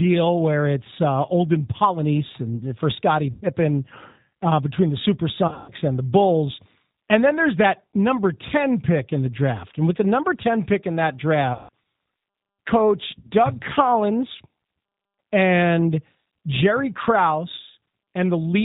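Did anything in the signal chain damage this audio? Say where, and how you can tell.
Yes. The G.729 codec runs throughout, at 8 kbit/s: speech is rebuilt from a filter and sparse pulses, nothing above 4 kHz, leaving it rough and synthetic.

VoIP packet loss concealed by the speech codec hits the network stage at 3.31, 5.48 (after "uh between the"), 11.53 (after "pick in that") and 13.19 s. The decoder extrapolates buzzy or noisy, fading sound over gaps of 60 to 180 ms.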